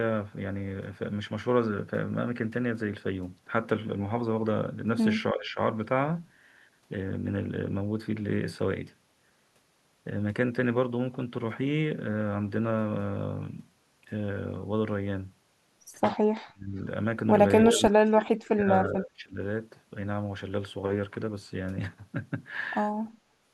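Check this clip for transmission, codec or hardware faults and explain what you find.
Two faults are audible: speech suppressed in double talk, and an echo leak.

Speech suppressed in double talk at 5.33–5.59 s, 16.45–16.76 s, 17.68–18.69 s and 18.9–19.4 s. The speech dips by roughly 10 to 30 dB, likely because an echo canceller misread overlapping talk as echo. The level ducks rather than dropping to digital silence as packet loss would.

Echo leak at 23.06–23.1 s. A very faint copy of the speech returns 328 ms later, likely residue the canceller missed. That fixed delay marks it as echo, not room reverb.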